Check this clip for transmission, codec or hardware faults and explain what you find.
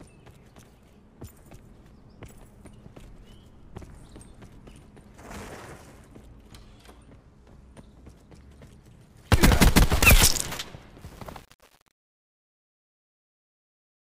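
One fault turns up, on the closing fade. From 11.02 s to 14.12 s the fade-out turns gritty. This is truncation distortion on a fade, from a volume stage with too few bits and no dither, which fits 8-bit resolution.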